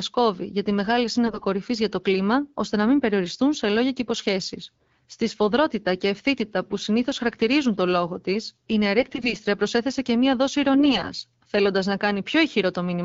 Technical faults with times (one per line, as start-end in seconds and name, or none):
1.26-1.45 AMR bit errors
8.98-9.34 AMR bit errors
10.74-11.06 AMR bit errors